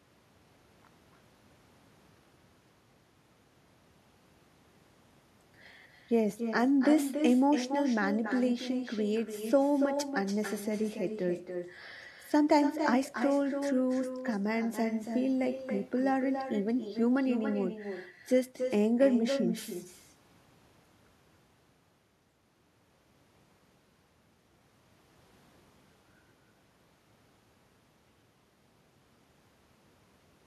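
From start to finish there's echo with no canceller: the far end's loudspeaker feeds its microphone, nothing strips it out, so every phrase returns roughly 0.3 seconds later, about 8 dB down, sounding thinner than the original speech.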